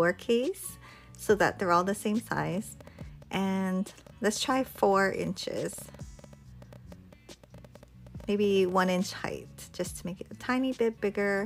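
A train of clicks ticks through 2.38 to 9.13 s: about seventy, uneven, 9.3 per second, near the sound's level. Likely cause: nearby interference.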